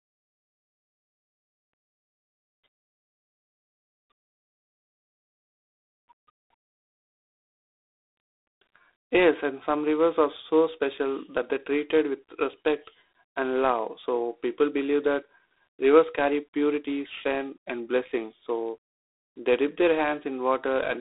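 From start to finish the speech carries G.726 ADPCM damage: a harsh, rasping hiss that swells and fades with the speech level, which fits 24 kbit/s. It is set apart from plain telephone band-limiting by that level-tracking grit. The band runs about 300 Hz to 3.7 kHz, with nothing above 3.9 kHz.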